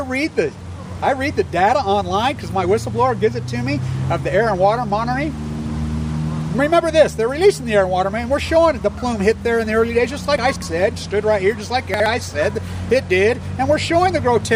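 At 10.38 s the sound jumbles for a quarter-second, to 10.62 s: chunks out of order. A 60 ms chunk arrived three chunks late and plays after material meant to follow it, so nothing is missing but the sequence is scrambled, with three hard joins. At 11.94 to 12.06 s a chunk one place late does the same, more briefly. A waveform shows abrupt discontinuities at each join, and a spectrogram shows vertical broadband lines with mismatched content either side.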